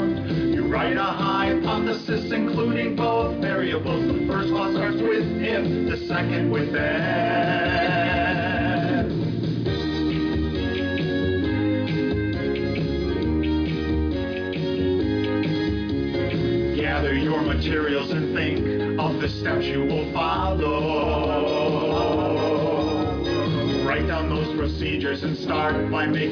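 No technical faults can be heard anywhere in this recording.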